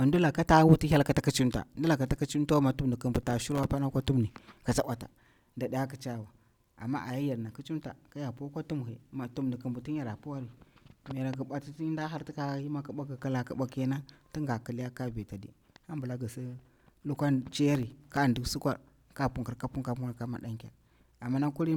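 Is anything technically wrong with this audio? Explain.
Yes. There are two bursts of processor overload crackle in this speech, from 3.16 to 3.70 s and from 17.71 to 18.17 s. In each, the processor repeatedly failed to finish very short audio buffers, around a millisecond and a half each, in time, and every missed buffer was replaced with silence. These roughly 20 and 15 tiny, hard-edged dropouts in quick succession sound like a gritty, tearing crackle over the speech that stops once the load eases.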